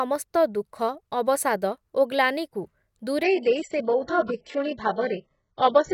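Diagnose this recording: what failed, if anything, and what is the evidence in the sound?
Network stage: at 3.23 s the speech suddenly dulls, with nothing above 7.9 kHz, no gap. That's an adaptive stream at a lower bitrate, consistent with HE-AAC at around 8 kbit/s.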